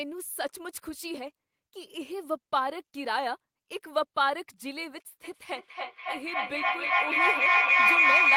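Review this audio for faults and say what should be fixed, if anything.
A feedback howl starts at 5.24 s and runs to the end at 8.36 s, peaking about 10 dB above the speech. The sound loops from loudspeaker into microphone and gains level each pass, narrowing to a piercing tone around 3 kHz, with the loop repeating roughly every 0.3 s. Unlike ordinary echo, where repeats fade away, these repeats grow louder and become a single tone. To prevent it, mute all but one device in the room or use headphones.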